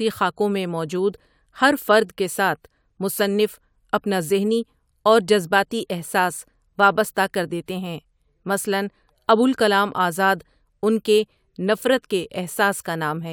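Nothing in this speech recording stood out as a technical problem on listening.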